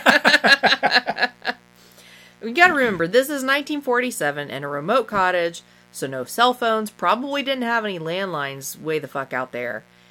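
A mains buzz runs under the speech for the whole clip. Sharp switching spikes from the 60 Hz supply leak in twice per cycle, adding harmonics into the kilohertz range. It sounds like a steady, raspy buzz, roughly 35 dB below the speech.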